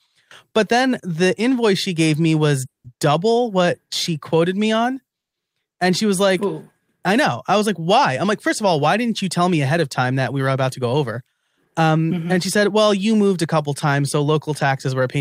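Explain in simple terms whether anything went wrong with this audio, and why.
Call audio freeze, at 2.65 to 2.86 s and 5.19 to 5.35 s: the speech stops briefly right after "she gave me was" and again after "she quoted me on." The first pause lasts about 0.19 s, mostly silent; the second lasts 0.14 s and is silent throughout. The likely cause is delayed network packets: the receiver ran out of audio and waited. When the packets arrived, speech resumed where it had stopped, so nothing was lost. The pauses were inserted, adding delay.

Jitter buffer speed-up, at 10.11 to 11.29 s, just after "tell me ahead of," and again at 14.86 to 15.16 s: the speech runs about 10% fast but keeps its normal pitch, so it sounds hurried rather than squeaky. The receiver had built up too much stored audio and trimmed it by cutting out many tiny slices. That removed roughly a seventh of a second in the first stretch and a few hundredths of a second in the second.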